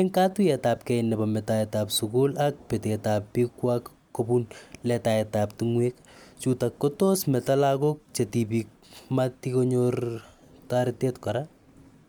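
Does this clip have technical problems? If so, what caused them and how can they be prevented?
No, this speech recording shows no technical fault, so there is no cause to trace and nothing to prevent.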